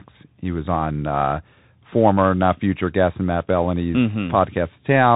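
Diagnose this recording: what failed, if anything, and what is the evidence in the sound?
At the codec stage, the whole clip carries Bluetooth CVSD headset codec damage. The one-bit up/down delta coding, which fits a 64 kbit/s stream, cuts everything above 4 kHz, roughens s sounds and leaves granular hiss. A spectrogram shows a hard 4 kHz ceiling over a grainy noise floor.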